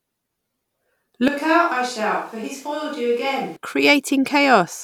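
A short speech recording changes character abruptly from 1.28 s to 3.56 s: the voice turns roomy and hollow, thins out in the bass, drops by roughly 10 dB, and sits over room noise only about 30 dB down. The cause is likely a switch to a distant microphone. Added reverb or an EQ cut would not also raise the noise floor, and it is the hard switch in and back out, rather than a gradual drift, that points to a change of microphone.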